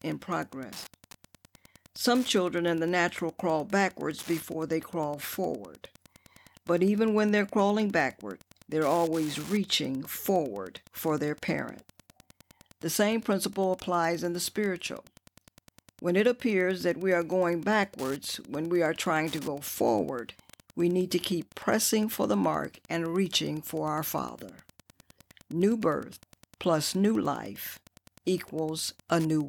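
A steady tick runs under the speech from start to finish, about ten times a second. This is Wi-Fi interference. A nearby radio's beacon, every 102.4 ms, is rectified by the audio circuit. The ticking sits roughly 25 dB below the speech.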